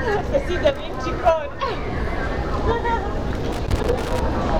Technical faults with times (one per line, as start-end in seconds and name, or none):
3.52-4.21 loose connector crackle